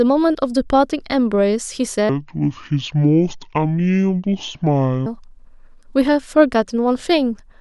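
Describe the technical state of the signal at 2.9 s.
At 2.9 s the speech sits inside a section at the wrong speed, running from 2.09 to 5.06 s at 0.603 times normal, likely from playback against the wrong clock. Pitch drops about ten semitones while timing stretches with it, which sets it apart from a pitch shift that would keep the original pace.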